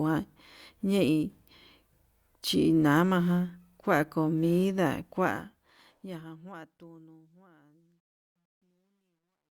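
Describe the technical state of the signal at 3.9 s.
At 3.9 s the speech signal is intact, with no audible fault at that point.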